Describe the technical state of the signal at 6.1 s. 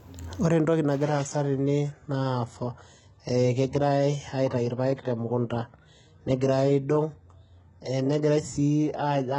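Adaptive stream at a lower bitrate, from 1.04 s to the end of the clip. The stream switched abruptly, without a gap, to a much leaner encoding that fits a roughly 12 kbit/s HE-AAC version, so at 6.1 s the speech has nothing above 11.1 kHz and carries audible codec artefacts.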